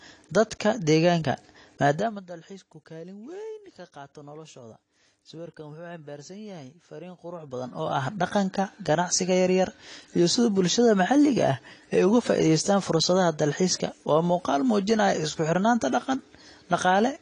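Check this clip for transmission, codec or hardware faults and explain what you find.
One codec fault is present, and it runs through the whole clip. AAC compression damage is plainly audible from start to finish. Nothing remains above 10.2 kHz. The sound points to AAC-LC at around 32 kbps, a likely cause. The coder quantises each frame's spectrum coarsely, lowering the cut-off and leaving holes or noise-filled bands. The speech sounds dull and smeared, with fizzy, warbling sibilants.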